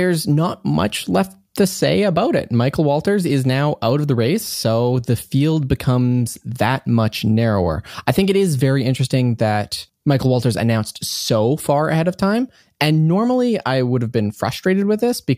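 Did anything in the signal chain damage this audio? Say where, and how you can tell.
No, nothing along the chain from capture to playback has left an audible mark on this speech, so there is no stage to point to and no damage to explain.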